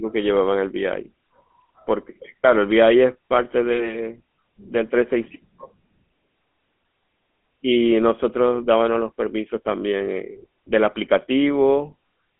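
From start to finish the speech carries the sound of the GSM full-rate codec. This coder rebuilds the voice from a vocal-tract filter excited by evenly spaced pulses, and the damage is plainly audible as a buzzy, gravelly roughness. The band sits at roughly 200 Hz to 3.5 kHz, which fits a telephone line, and nothing remains above about 3.9 kHz. A spectrogram shows a hard ceiling there with empty space above it.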